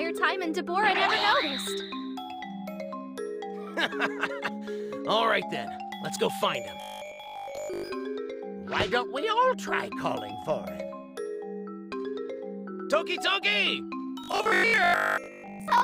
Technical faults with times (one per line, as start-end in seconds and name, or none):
6.82-7.90 robotic sound from repeated short buffers
14.24-15.82 robotic sound from repeated short buffers